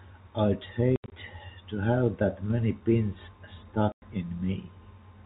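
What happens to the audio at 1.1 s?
Packet loss filled with silence hits from 0.96 to 1.12 s, just before "to have that many". About 120 ms drops out in hard-edged gaps. The longest gap is 80 ms.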